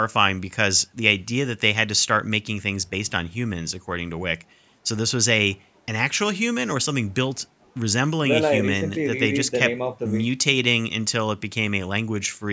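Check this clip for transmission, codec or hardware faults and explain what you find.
No transmission, codec or hardware faults turn up in this speech clip.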